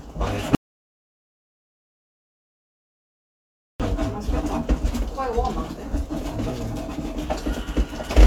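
A recording of sound with an audio dropout to silence. At 0.55 s the sound cuts out completely, with no room tone. It returns at 3.80 s, so about 3.2 s is lost. The input was likely lost while the recorder kept writing silence.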